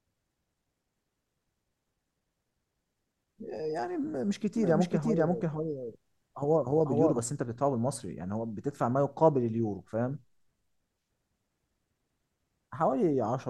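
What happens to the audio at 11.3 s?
Nothing goes wrong at 11.3 s; the speech runs through that moment intact, with no dropout, click or distortion.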